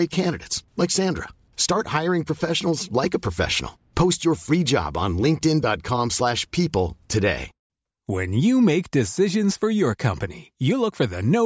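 There are no technical faults to describe in the speech, so there is nothing to place in time order.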